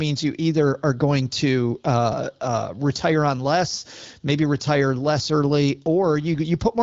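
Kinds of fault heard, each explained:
No faults heard in this clip.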